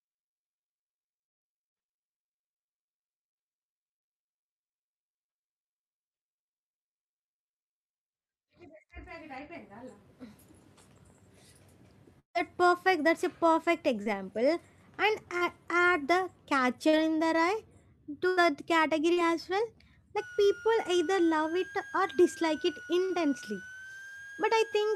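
At 12.19 to 12.38 s the sound carries on as a fading buzz, then drops to near silence, before "perfect that's a perfect". This is likely a long network dropout, with about 160 ms of audio lost.

Short concealed packet loss follows at 14.03, 15.38 (just before "add the"), 16.89 (between "add the" and "in the") and 19.13 s. Each gap of about 40 ms is patched by extending the last sound, leaving a brief smear or wobble.

A burst of packet loss at 18.29 to 18.40 s loses about 80 ms. The receiver holds and fades the prior sound, so it becomes a dying buzz or hiss.

From 20.18 s to the end, a switching supply whistle sits near 1.5 kHz, wandering between 1.4 and 1.6 kHz. It is about 20 dB below the speech. A power supply running in burst mode or beating with another one causes it.

A second burst of packet loss at 23.05 to 23.13 s drops about 40 ms. It is covered by a 50 ms fading continuation.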